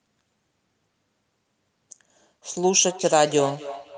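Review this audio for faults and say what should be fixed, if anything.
From 2.47 s to the end, speech returns as a thin, ringing repeat about every third of a second, about 15 dB below the direct sound. This is feedback echo between two devices: another device in the room replays this microphone's signal, and this microphone picks it up again, outside its own echo canceller's reach. Join each room with only one device, or mute the second device's speaker.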